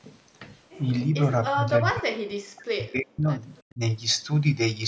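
From 1.53 to 3.32 s the speech repeatedly dips and drops out, for about one and a half seconds in total, sinking by around 40 dB at worst. This is speech suppressed in double talk. The echo canceller likely mistook simultaneous talk for echo and muted it.

At 3.57 to 3.61 s a faint echo leak appears, a copy delayed by 329 ms and far below the speech, around 35 dB down. The canceller likely left residue from a loudspeaker.

At 3.71 to 3.8 s, the speech again briefly drops by around 20 dB. Double-talk suppression likely recurred here.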